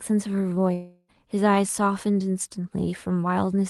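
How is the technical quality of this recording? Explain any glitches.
The recording has one clear glitch, a gap of about a third of a second early in the clip. The top end stops near 12 kHz, which fits a call codec such as Opus at around 32 kbps.

From 0.73 s to 1.10 s there is a long network dropout, likely. About 0.36 s of audio never arrived. The receiver filled roughly 0.35 s of it by stretching the last sound into a fading buzz or hiss. A brief silence follows. The speech then resumes, with the lost part missing.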